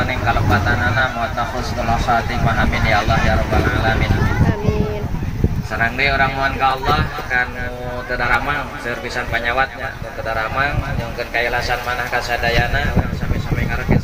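From 0.18 s to 13.25 s a click recurs every 0.82 s, about fifteen in all, heard only while sound is present. The evenly spaced slips point to clock drift buffer slips: two devices likely running on separate clocks roughly 700 ppm apart, so a buffer periodically drops or repeats a few tens of samples. A spectrogram would show thin broadband vertical lines at that regular spacing, and a waveform would show matching discontinuities.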